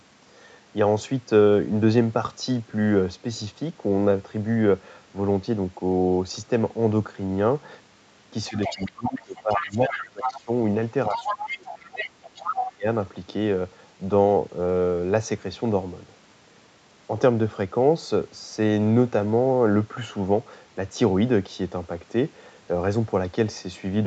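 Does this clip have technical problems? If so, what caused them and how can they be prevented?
Yes. From 8.45 to 10.4 s and again from 11.13 to 12.72 s, a second voice can be heard underneath, roughly 10 dB below the main talker. This is likely the other side's voice leaking through: the far end's loudspeaker sound reached the microphone, and the echo canceller failed to remove it fully. Tuning the echo canceller's adaptation, or using a headset so the loudspeaker cannot feed the microphone, would prevent it.

In those same stretches the main voice sinks and breaks up, from 8.49 to 10.49 s, 11.09 to 12.04 s and 12.39 to 12.87 s, falling by about 20 to 25 dB at worst. This is likely speech suppressed in double talk: with both sides speaking at once, the canceller could not tell its own talker from the echo and attenuated everything. Better double-talk detection, or gentler residual-echo suppression, would keep the near voice intact.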